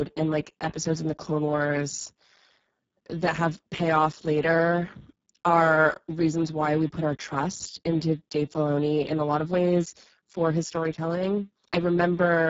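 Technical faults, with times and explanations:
Throughout, Speex codec: the speech sounds hoarse, grainy and buzzy, drifting toward a robotic, vocoder-like quality, with nothing above about 7.7 kHz. This is heavy Speex damage, which points to a very low setting of roughly 6 kbps. The codec's CELP model has too few bits to describe the excitation behind the voice, so the speech is rebuilt from a coarse approximation, and the upper band carries only a shaped, noise-like fill rather than real detail.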